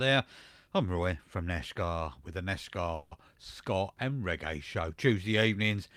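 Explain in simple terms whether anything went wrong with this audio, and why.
A call audio freeze hits at 2.95 s. The sound stretches and fades for about 0.16 s. Packets were likely delayed. Nothing is lost, just late.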